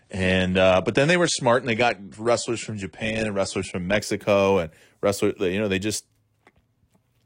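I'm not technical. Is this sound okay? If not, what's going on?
No. The player began this adaptive stream at a low bitrate, so until 4.0 s the speech sounds dull and blurry, then it suddenly clears just before "and wrestlers".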